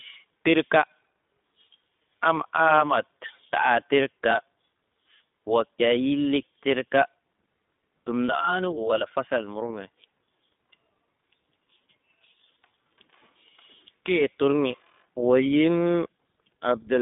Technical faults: iLBC codec

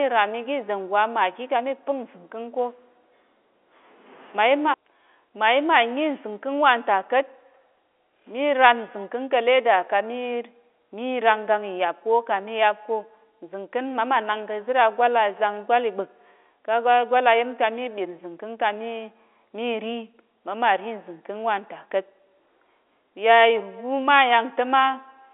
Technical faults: none

